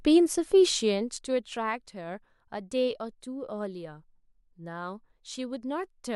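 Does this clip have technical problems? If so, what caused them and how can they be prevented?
No, there are no technical problems in this speech clip, so there is nothing to prevent.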